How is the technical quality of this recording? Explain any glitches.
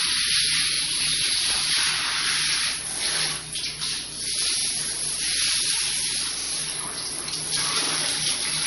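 The technical quality is poor. The sound is dulled by heavy compression and interrupted by five brief stutters.

The MP3 compression damage runs throughout and is plainly audible. Nothing is heard above 11.2 kHz, so the treble is cut off flat. The texture sounds watery and swirly, and transients smear. The encoder is short of bits, so it drops the top band and lets weak frequency lines flicker on and off between frames. The likely cause is MP3 encoding at a low bitrate, which fits about 48 kbps.

Repeated buffers occur at 0.74, 2.93, 4.60, 6.41 and 7.85 s. Each repeated piece lasts about 46 ms, which fits a 2048-sample buffer. New audio arrived late, so playback reran the last block. At 6.41 s the block plays twice more, lasting to 6.50 s. Elsewhere it repeats once. Each sounds like a short stutter with a hard join. Nothing seems to be skipped afterwards.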